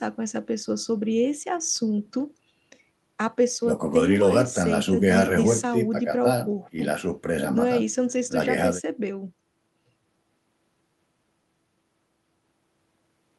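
No technical faults can be heard anywhere in this recording.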